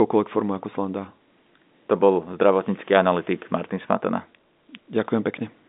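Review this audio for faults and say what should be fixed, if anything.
Nothing needs fixing: the speech carries G.711 A-law telephone coding at 64 kbps working as intended, with the band running from about 200 Hz to 3.7 kHz and nothing above 3.8 kHz.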